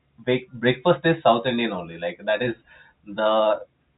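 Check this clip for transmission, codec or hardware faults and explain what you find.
Nothing in this speech recording points to a transmission, codec or hardware fault. It carries the narrow sound of G.711 telephone coding, with nothing above about 3.8 kHz and the coding leaving at most a faint trace.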